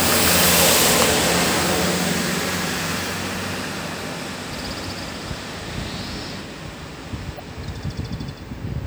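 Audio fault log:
2.94–2.98 s and 7.36–7.40 s, damaged data in a compressed stream: corrupted frames make the decoder lose sync, producing a brief, roughly 40 ms glitch.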